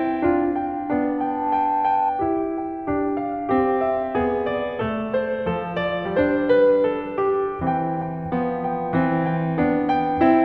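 From 1.18 s to 2.12 s, loudspeaker feedback squeal cuts across the music. A microphone is picking up the loudspeaker it drives, and at 878 Hz the loop gain passes unity, so that tone swells within about a third of a second to roughly the music's level.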